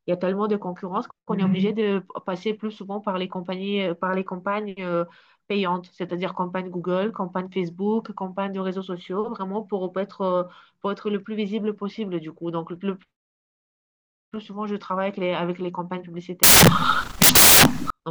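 At 16.43 s the reader starts assembling each sample from the wrong bytes, taking them misaligned or in reversed order, so the rapidly fluctuating low-order bits land in the most significant position of every value. Until 17.90 s the speech is swamped by loud, harsh broadband noise.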